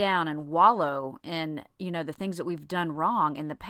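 A short speech recording, and there is nothing technically wrong to point to in it. No moment in the clip calls for a time or a cause.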